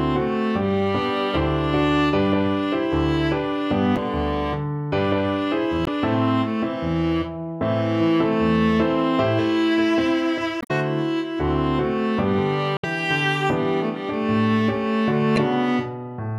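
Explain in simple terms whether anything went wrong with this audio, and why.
Five short blips come from damaged data in a compressed stream. Corrupted bytes make the decoder lose its place briefly, at 3.93–3.98, 5.84–5.88, 10.59–10.71, 12.76–12.85 and 15.34–15.38 s.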